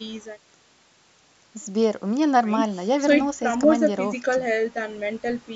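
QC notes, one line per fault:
The speech has passed through normal call microphone processing, with the lowest bass trimmed by its high-pass filter and nothing present above 8 kHz.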